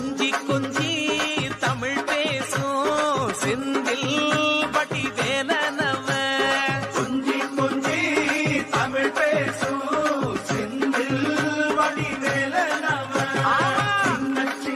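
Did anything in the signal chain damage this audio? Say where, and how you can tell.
Yes, there's a train of clicks from 11.45 s to 14.71 s, roughly forty similar ticks at about 11.4 per second, unevenly spaced and about as loud as the sound itself. Most likely interference getting into the analogue wiring, or a faulty connection or power supply.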